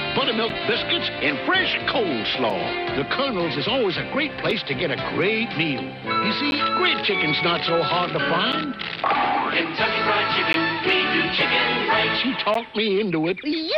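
Gaps between stream segments occur at 0.49, 2.50, 4.51, 6.51, 8.52, 10.53 and 12.54 s. Mismatched timestamps at each 2-second segment boundary leave a hole of 5 to 13 ms, which the player fills with silence, so the sound drops out abruptly with hard edges.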